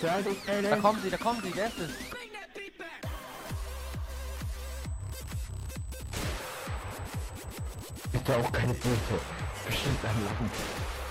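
From 4.63 s to 10.09 s a fixed-pitch 8 kHz whine sits roughly 25 dB under the sound: USB whine, from 125-microsecond microframe current leaking through power or ground.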